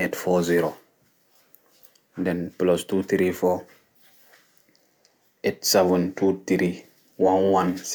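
No technical faults are audible.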